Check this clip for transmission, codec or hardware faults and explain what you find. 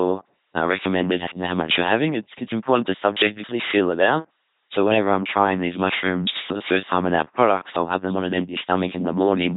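One codec fault runs through the whole clip: the speech has passed through an LPC-10 vocoder. Throughout, a ten-pole tract filter driven only by pulses or noise makes a heavily buzzing robotic voice, which fits a 2.4 kbit/s rate, with nothing above 3.8 kHz.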